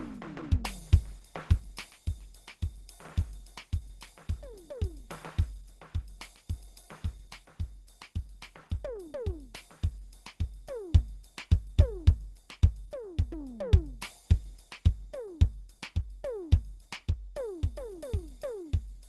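Likely Opus compression at a rate fitting about 16 kbps, in hybrid speech mode, runs throughout this music: it has nothing above 12.2 kHz and sounds muffled and hoarse.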